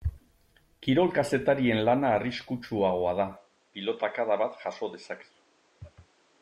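At 3.37 s the input likely switched to a poorer device: from there on, the speech loses everything above 8.9 kHz and gains a faint new noise floor, with no gap at the switch.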